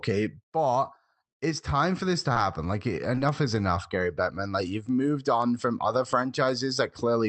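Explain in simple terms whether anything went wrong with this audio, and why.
Short concealed packet loss occurs twice, at 2.33 to 2.37 s and at 3.15 to 3.19 s. Each time about 20 ms of the call arrived too late, so the receiver briefly continued the previous sound to cover the gap, causing a tiny smear.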